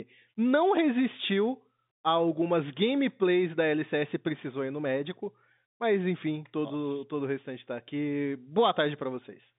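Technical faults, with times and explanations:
No technical faults; the speech is carried by G.711 telephone coding, with the line band running from 150 Hz to 3.7 kHz and nothing above 3.8 kHz.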